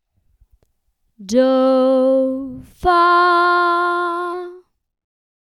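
No technical faults are audible anywhere in the audio.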